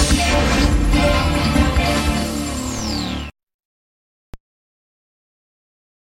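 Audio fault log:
4.34 s, DC step: the waveform's zero line abruptly shifts by about -20 dBFS, then relaxes back toward centre as a 20 Hz high-pass drains the offset away. That sudden jump and slow return produce a single dull low thump while the sound carries on unchanged. On the waveform the whole trace lifts off-centre at once, then sags back; a spectrogram shows a brief vertical smear concentrated at the lowest frequencies at that instant.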